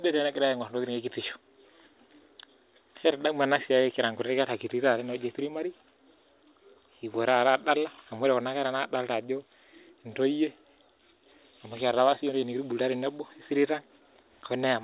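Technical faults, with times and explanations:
No technical faults are audible.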